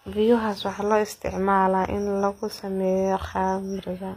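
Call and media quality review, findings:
Gritty, metallic, lispy sibilants throughout. Likely HE-AAC compression at a low bitrate, sounding near 24 kbps: treble rebuilt by spectral band replication from copied lower bands, with harmonics misaligned above the crossover. Spectrogram: repeated, smeared upper-band texture, hard ceiling at 15.5 kHz.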